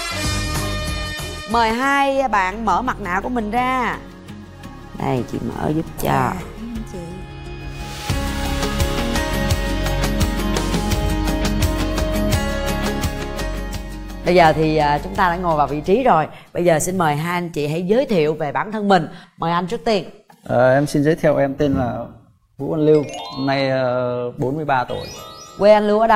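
No technical faults can be heard at any point in the audio.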